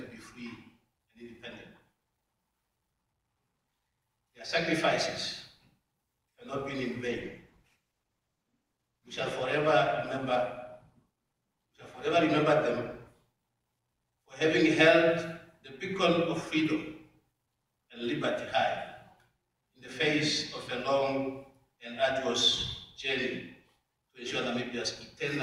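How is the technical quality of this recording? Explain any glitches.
One glitch stands out: a call bitrate drop from 7.08 s to 13.41 s. The sound turns rough and watery, and the top end dulls, before clearing again. The connection's bandwidth estimate fell, so the encoder went from 128 kbps down to 15 kbps, bottoming out for about 1.5 s. With so few bits, Opus codes the signal coarsely and narrows the audio band from 20 kHz to 12 kHz, which explains the lost brightness.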